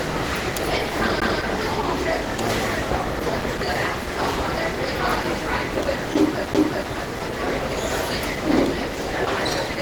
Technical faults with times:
0.00-9.82 Opus compression
1.20 CD skip
6.54 CD skip

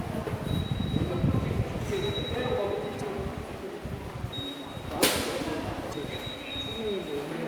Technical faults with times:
2.97-3.01 damaged data in a compressed stream
5.89-5.94 damaged data in a compressed stream

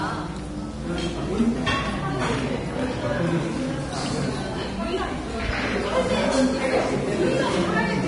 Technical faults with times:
0.00-8.08 Vorbis compression

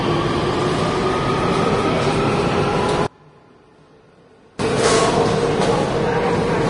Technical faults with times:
0.00-6.69 Vorbis compression
3.07-4.59 one channel inverted

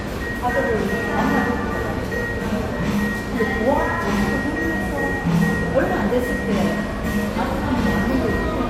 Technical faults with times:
none

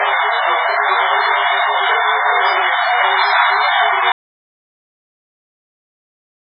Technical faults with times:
0.00-6.56 MP3 compression
4.12-6.56 audio dropout to silence

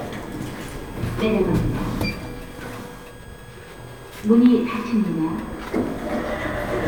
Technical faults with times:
0.00-6.87 switching supply whistle

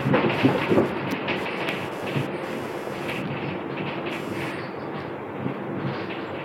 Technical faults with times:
0.00-6.44 computer activity noise

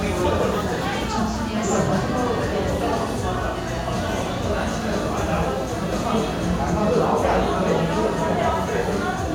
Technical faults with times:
none

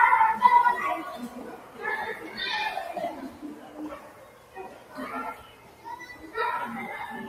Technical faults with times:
0.00-7.28 noise suppressor applied to music or sounds
1.36-1.81 sound cut by the noise suppressor
2.16-2.37 sound cut by the noise suppressor
3.29-4.97 sound cut by the noise suppressor
5.35-5.86 sound cut by the noise suppressor

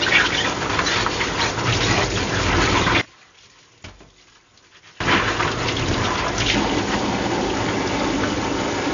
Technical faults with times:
0.00-8.93 AAC compression
3.01-5.00 one channel inverted

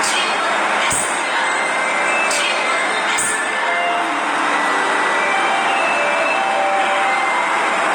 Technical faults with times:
0.00-7.95 Opus compression

